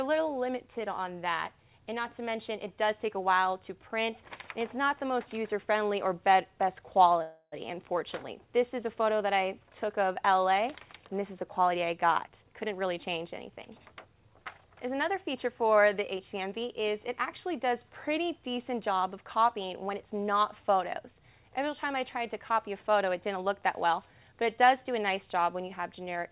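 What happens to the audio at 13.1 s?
A jitter buffer speed-up runs from 12.28 to 14.37 s. Short pitch-period slices are cut repeatedly, so the audio plays about 14% faster at unchanged pitch.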